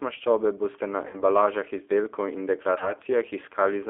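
Speech carried over a G.729 codec (the G.729A variant at 8 kbit/s), heard throughout as a narrow line band of roughly 300 Hz to 3.5 kHz, with a clearly rough, slightly synthetic grain. That grain separates it from a simple telephone band-limit: the coder rebuilds each 10 ms frame from a vocal-tract filter, a pitch predictor and a handful of pulses. VoIP packet loss concealed by the speech codec occurs twice. The first gap runs from about 1.07 to 1.22 s, between "boste na" and "izdelkov in", where about 60 ms of audio is missing. The second runs from about 2.78 to 2.92 s, just after "izdelkov in", with about 30 ms missing. Both gaps are bridged rather than left silent. The decoder stretches its last pitch and filter into a buzzy tone or coloured noise that fades, and because each frame builds on the previous one, the speech stays weak and smeared for a short while after audio resumes. That smearing is what distinguishes these gaps from a hard dropout or a click.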